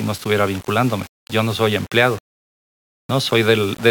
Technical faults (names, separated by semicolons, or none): low bit depth without dither